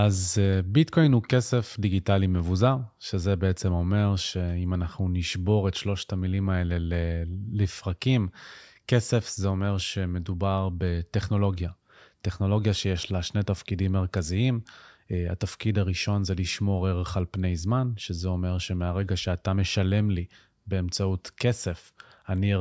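No technical faults can be heard anywhere in this speech recording. Nothing in it calls for a time mark or a note on how the sound was carried.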